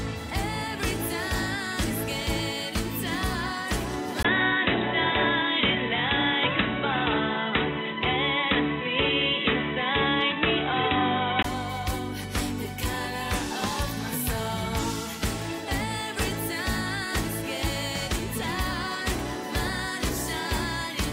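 At 4.23 s the input has likely switched to a poorer device, a second microphone or a headset's narrowband profile, for the stretch up to 11.45 s. A brief gap of about 20 ms marks the change. From there the audio turns dull and boxy, with nothing above 3.9 kHz, the level shifts by around 5 dB, and a new, faint background noise appears far beneath the signal. At 11.45 s the full-band sound returns.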